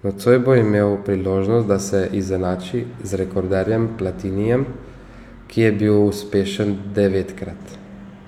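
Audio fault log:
No technical faults can be heard anywhere in the signal.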